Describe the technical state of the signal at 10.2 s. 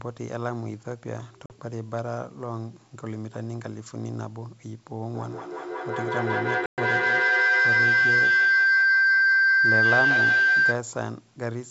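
At 10.2 s we're deep in a feedback howl (5.14 to 10.86 s): the mic-to-speaker loop keeps gaining, so a tone near 1.5 kHz builds with a loop delay of about 200 ms, peaking roughly 10 dB over the speech.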